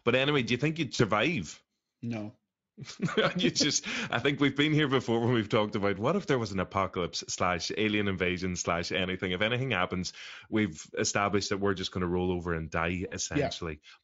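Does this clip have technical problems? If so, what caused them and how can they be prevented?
Yes. Two short dropouts are VoIP packet loss concealed by the speech codec. The first is at 0.95 to 1.02 s, right after "do you think you'd". The second is at 13.07 to 13.15 s, after "to roll over and". Each gap is about 40 ms, which fits two lost 20 ms frames. The decoder guessed the missing audio from its last pitch and filter and lowered the level. The sound smears briefly and takes a moment to recover. A jitter buffer, forward error correction, or a more reliable network path would prevent it.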